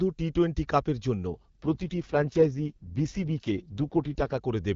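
An AMR rate drop runs from 1.28 s to 4.38 s. Over a weakening radio link the network orders the AMR wideband (HD Voice) codec down to a lower rate, giving more bits to error protection and fewer to describing the speech. The bandwidth holds and nothing drops out, but the speech turns rough, raspy and synthetic. That texture fits a fall from the top 23.85 kbit/s mode to 6.6 kbit/s, and the speech clears again once the rate recovers.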